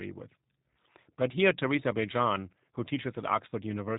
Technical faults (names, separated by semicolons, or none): G.729 codec